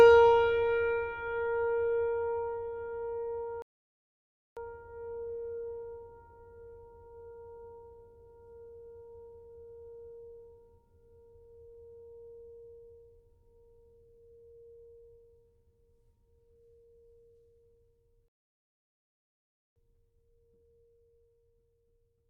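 The music cuts out abruptly at 3.62 s and stays silent until 4.57 s, a gap of about 0.95 s, then does so again from 18.28 s to 19.76 s, nearly 1.5 s. Each time the sound halts mid-flow and later resumes. These are playback stalls: the player was likely starved of data or had its audio thread blocked, so the output went silent until it could refill and continue.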